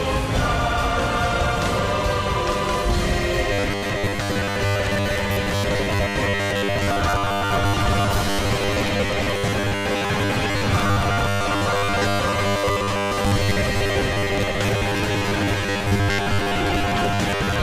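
From 3.53 s to the end, new audio likely arrives too seldom, so short buffers are repeated, and about 70 percent of what plays is recycled material. This is robotic sound from repeated short buffers: a rigid, metallic 100 Hz buzz, which fits 10 ms repeats.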